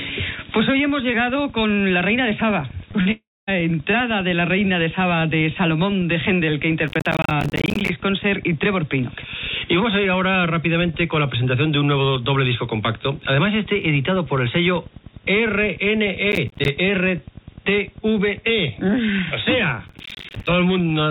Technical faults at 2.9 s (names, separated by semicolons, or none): short concealed packet loss